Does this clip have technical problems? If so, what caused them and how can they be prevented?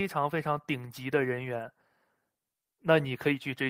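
No, the speech signal shows no technical faults, so there is nothing that needs preventing.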